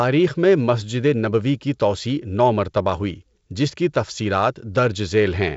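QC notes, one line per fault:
The speech is band-limited with nothing above about 7.7 kHz and carries a faint hiss in the upper band, which fits G.722 wideband telephone coding at 56 kbit/s working as intended.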